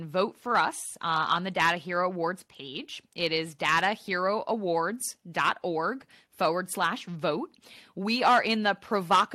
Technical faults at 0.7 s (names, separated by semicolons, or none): none